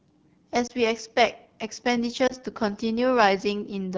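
The speech runs through the AMR wideband (HD Voice) codec for its whole length. The damage is plainly audible. The texture sounds like one of the lowest AMR-WB modes, which fits 8.85 kbit/s. At that rate the pulse-driven vocal tract model has too few bits. Voiced sounds come out rough and raspy. The top band, 6.4 to 7 kHz, is filled with shaped noise rather than real detail.

At 0.67 to 0.73 s there is a lost AMR speech frame. A radio error made the frame fail its checksum. The decoder filled the gap by repeating the last good pitch and vocal tract settings at reduced gain. It sounds like a brief dip or warble. The gap points to a single 20 ms frame. The same fault returns at 2.27 to 2.35 s, again a short dip or warble from one lost frame.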